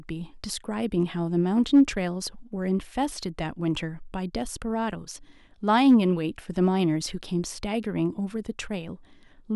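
Hard clipping hits this speech clip briefly from 1.75 to 1.81 s and again from 5.81 to 5.95 s. Peaks overdrive a stage by about 2 dB and about 1 dB, flattening their tops into short harsh crackle.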